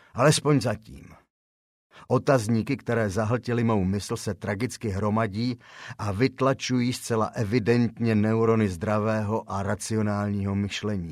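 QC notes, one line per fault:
No faults heard in this recording.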